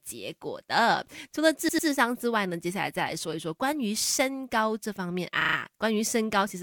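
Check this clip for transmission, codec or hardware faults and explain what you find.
Two stretches of repeated frames stand out, one near the start and one near the end of the speech.

From 1.68 to 1.87 s, an 88.5 ms block plays three times in a row, adding about 197 ms. From 5.40 to 5.55 s, a shorter 27.6 ms block plays five times, adding about 151 ms. A run of compressed frames was sent or stored more than once, so the decoder replays it. The first sounds like a stammer. The second, with its faster 27.6 ms repeat rate, is a quicker stutter. On a waveform, identical envelope shapes tile side by side. On a spectrogram, the same column pattern recurs at regular intervals.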